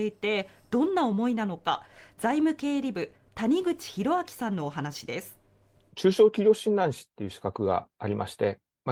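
A short bit of speech, and there's nothing technically wrong to point to anywhere in it.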